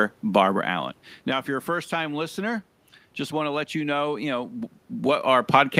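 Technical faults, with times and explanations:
No technical faults are present: the signal carries the speech with background room noise, and the level changes near half a second and again around 4.5 seconds come from the talker moving relative to the microphone, not from the system.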